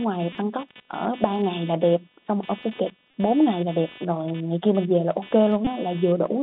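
From the start, the speech runs through the Bluetooth CVSD headset codec. That one-bit delta scheme, which fits a 64 kbps link, leaves roughly 150 Hz to 3.7 kHz. Loud high sounds overshoot the adapting step, so sibilants turn scratchy over a grainy hiss.

Underneath the whole clip there's computer activity noise. Processor or graphics load is shifting the shared audio ground, which gives a buzzy, chirpy pulsing at around 300 Hz, roughly 20 dB below the speech. It follows the machine's activity, not the talking.

Then there are three short runs of Bluetooth headset packet repeated, at 0.33 to 0.36 s, 3.11 to 3.14 s, and 5.65 to 5.68 s. Each time, lost packets were filled by decoding the previous one again. Lasting about 19 to 26 ms, which suggests five to seven packets, each is a brief buzzy blip near 267 Hz.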